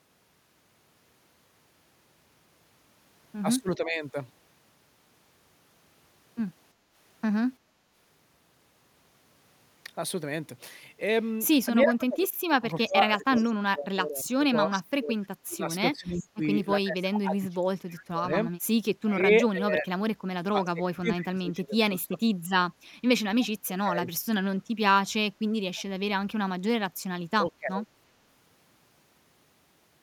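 At 3.77 to 4.04 s the speech dips by roughly 10 dB, likely speech suppressed in double talk: the echo canceller turns down the near talker while the far side is also speaking. From 6.74 to 7.84 s only the room sound sinks, by about 7 dB, and then returns. That is background gated by the echo canceller, which affects the ambience rather than the speech. From 11.85 to 22.29 s the speech dips, dropping by as much as 30 dB, again with double talk as the likely cause. At 13.36 s and 25.75 s a faint copy of the voice is heard 341 ms late, likely echo leak. It adds a delayed repeat where the other faults take sound away. Further double-talk dips, likely from the same cause, fall at 23.65 to 24.08 s and 27.39 to 27.89 s.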